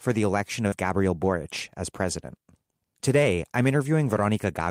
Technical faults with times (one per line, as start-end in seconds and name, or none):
0.67-0.74 short concealed packet loss